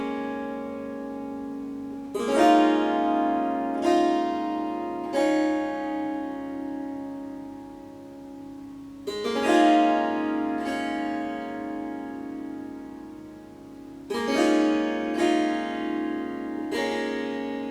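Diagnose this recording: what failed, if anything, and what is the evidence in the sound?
Nothing here points to a failure at any stage, and the sound gives no sign that anything in the chain went wrong.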